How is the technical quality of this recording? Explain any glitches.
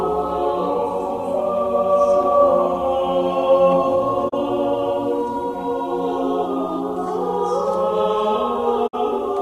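Two short holes break up the music. Both are digital broadcast dropouts. At 4.28 to 4.34 s and again at 8.86 to 8.95 s, the receiver got bad frames and muted, fading out over about 20 ms. The losses are 24 ms and 48 ms, which fits one and then two dropped frames.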